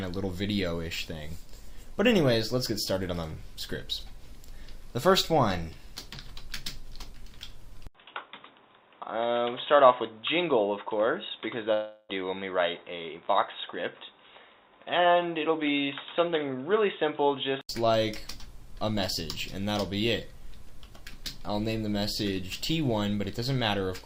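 At 7.87 s the sound drops out for about 80 ms, then returns dull and boxy. Nothing above 3.8 kHz remains, and a new noise floor sits roughly 45 dB down. Level stays about the same. This is likely an input switched to a poorer device. Full clarity returns at 17.69 s.

At 11.73 s, inside that stretch, the audio turns into a fading smeared buzz. This fill lasts about 356 ms with no silence. It is likely a long network dropout, with roughly 360 ms of sound lost. Normal audio resumes at 12.11 s.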